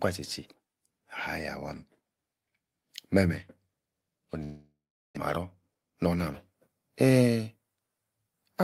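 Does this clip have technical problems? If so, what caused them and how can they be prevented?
Yes. From 4.43 to 5.19 s the speech stops: the last sound smears into a fading buzz, about 400 ms of silence follows, and the speech resumes with about 600 ms missing. This is likely a long network dropout, where no packets arrived and the receiver concealed the gap. A stable wired connection and forward error correction would help prevent it.

From 5.38 to 6.16 s the speech sounds hurried but keeps its pitch, running at 112% speed. This is a jitter buffer speed-up: after the delayed packets arrived in a burst, the receiver cut short pitch-period slices, roughly a tenth of a second in total, to shrink the excess delay. Steadier packet delivery and gentler buffer adaptation would prevent it.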